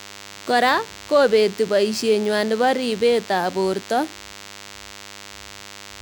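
Throughout the speech runs DECT cordless phone buzz, a thin 100 Hz buzz rich in harmonics, about 20 dB below the voice. Unlike mains hum, it sounds rasping rather than smooth.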